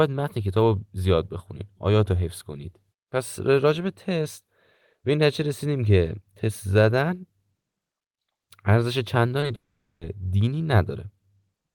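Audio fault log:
9.40–9.43 s and 9.47–9.50 s, short concealed packet loss: about 20 ms of audio went missing each time, and the receiver covered it by extending the preceding sound before blending back into the real signal. Each gap therefore comes through as a quick smear or wobble.
9.55–10.02 s, long network dropout: the sound stops, and what takes its place is a trailing continuation of the last sound that dies away, leaving roughly 410 ms of silence. This was likely caused by the stream ceasing to arrive. About 460 ms of the original is simply absent when playback resumes.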